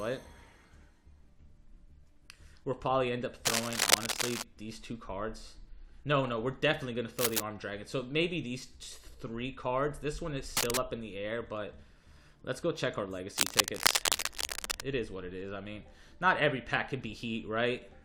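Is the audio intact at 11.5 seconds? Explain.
Yes, the audio is intact at 11.5 seconds, with no dropout, click, distortion or other fault at that moment.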